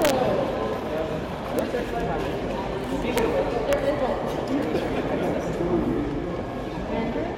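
Integer overflow cracks the sound four times: at 0.02 to 0.10 s, then at 1.59 s, 3.18 s and 3.73 s. Each time, a loud peak pushed the sum past the largest integer value. It was not limited. It wrapped to the opposite sign and flipped across the full range. The overdrive is small, about 1 dB at 0.02 s and 3.18 s, 0 dB at 1.59 s and about 2 dB at 3.73 s. Even so, each event is a violent crack, far sharper than clipping.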